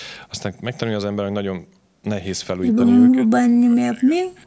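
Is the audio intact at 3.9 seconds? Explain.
No. At 3.9 seconds the speech sits inside a stretch of speech suppressed in double talk running from 3.08 s to the end of the clip at 4.47 s. The likely cause is an echo canceller that, with both sides talking, mistook the near talker for loudspeaker echo and attenuated it, with the level falling by roughly 40 dB at its deepest. The voice dips, thins out and drops away in fragments. On a waveform the envelope collapses in ragged chunks. A spectrogram shows the energy fading across the band, which already stops at 8 kHz.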